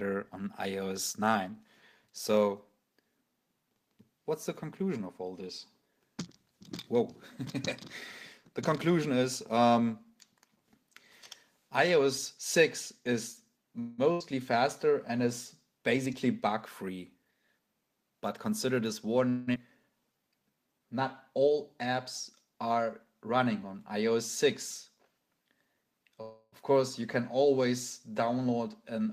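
A call audio freeze at 13.79 to 14.00 s and again at 26.22 to 26.54 s is most likely caused by packets stalling on the network until the jitter buffer ran dry. The receiver stretched the last sound into a fading buzz or hiss, about 186 ms the first time and about 307 ms the second, the latter ending in about 20 ms of silence. Then the audio picks up exactly where it halted, so nothing is lost but the delay grows by those amounts. A burst of packet loss follows at 14.12 to 14.35 s. Roughly 80 ms of audio never arrived in time, and about 81 ms of concealment, the previous sound held and turned down, covers the hole before playback resumes further along with that stretch absent. Jitter buffer speed-up appears at 15.82 to 18.11 s at about 108 percent, trimming around 0.2 s, then at 25.73 to 26.17 s at 116 percent and at 28.38 to 29.07 s at 110 percent, each trimming some 70 ms. Here the buffer held more than its target, and the receiver shed short pitch-period slices repeatedly, so the sound hurries while keeping its pitch. 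A long network dropout at 19.29 to 19.56 s is likely a lengthy gap in arriving audio. Concealment runs about 245 ms as a decaying buzz or hiss, and about 140 ms of material is gone when the sound returns, shifting the delay by roughly 50 ms. Right after, jitter buffer slow-down at 20.00 to 20.80 s plays at about 84 percent speed. The receiver repeated single pitch periods and bits of pauses to rebuild its reserve, adding about 136 ms, so sounds drag out at unchanged pitch.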